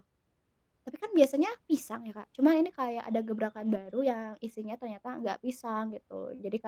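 From 3.57 to 3.91 s the speech turns briefly rougher and noisier but never drops out. This is a lost packet rebuilt from error correction: several separate packets went missing, and the decoder played the low-bitrate copies carried in the packets that followed. The degraded moments add up to about 180 ms, which fits nine lost 20 ms packets. Plain loss concealment would smear or buzz through a gap. Here the sound keeps moving naturally, only coarser.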